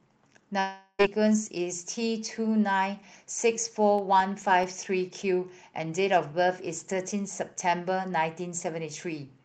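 Speech carried over a call-style link, with the top end cut off around 8 kHz, consistent with a voice codec running near 32 kbps. From 0.59 to 1.01 s the audio drops out for roughly 0.4 s. The receiver stretches the last sound into a fading buzz for nearly the whole gap, leaving only a brief silence of about 20 ms before the speech resumes with that stretch missing. This is a long network dropout, most likely caused by packets failing to arrive and concealment running out. Between 3.99 and 5.07 s, six short ticks occur at a steady rhythm, each well under a millisecond, of uneven strength. These are CD scratch ticks: a blemish on the disc wipes out more data than error correction can recover once per revolution, and the player bridges or mutes the damaged samples each time.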